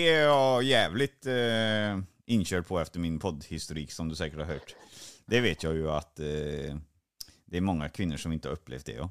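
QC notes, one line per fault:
No faults detected in this speech recording on review.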